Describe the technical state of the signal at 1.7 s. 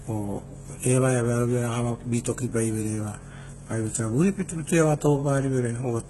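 At 1.7 s the speech carries the same HE-AAC compression damage heard across the whole clip, likely from a very low-rate HE-AAC v2 encode in the region of 16 kbps. Only the lower band is truly coded; the upper band is synthesized by copying lower content upward under a coarse envelope, so the harmonics fail to align across the crossover. The treble sounds gritty and metallic, with s sounds turning lispy, and nothing is present above about 11.8 kHz.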